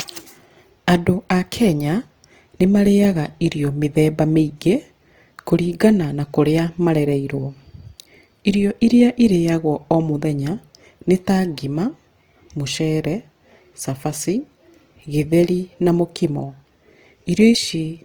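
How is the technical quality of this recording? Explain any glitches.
The recording has plainly audible codec damage from start to finish, most likely from Opus compression.

Throughout the clip, the encoder appears to be running in its music-oriented CELT mode at a low bitrate, around 24 kbps by the sound of it. It keeps each band's overall energy but fills bands it can't afford to code exactly with folded copies of lower bands or with noise. So the speech keeps its full bandwidth, extending to about 20.2 kHz, yet its tonal parts come out rough, grainy and noisy rather than clean.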